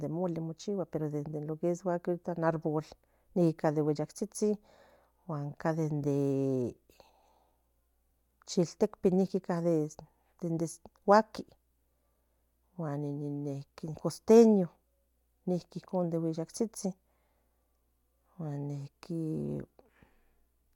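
No technical faults are audible anywhere in this speech.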